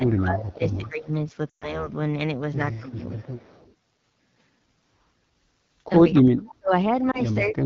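Throughout, the speech is carried by the AMR wideband (HD Voice) codec at 8.85 kbit/s, a low rate that makes it rough and raspy. A spectrogram shows a noise-filled 6.4 to 7 kHz band and nothing above.

From 0.0 to 1.11 s the speech is suppressed in double talk, dipping by about 15 dB. This is likely an echo canceller ducking the talker while the far side speaks, and the waveform shows the envelope pulled down. Within it, from 0.52 to 0.89 s, comes an echo leak: a faint copy delayed by 191 ms and about 30 dB down. It likely comes from a loudspeaker's residual echo, seen as a weak repeated trace on the spectrogram.

From 1.49 to 1.90 s, lost AMR speech frames (six frames, about 120 ms) make the sound drop to near silence. The spectrogram shows frozen, decaying harmonics before recovery.

Suppression recurs from 2.79 to 3.44 s (about 10 dB), with echo at 3.38 to 3.73 s (about 35 dB down). It recurs again from 6.11 to 6.71 s, where a gap of about 40 dB holds a louder echo scrap at 6.14 to 6.22 s (about 15 dB down). 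A single lost frame at 7.11 s gives a brief dip or warble, and suppression of about 35 dB runs from 7.43 s to the end.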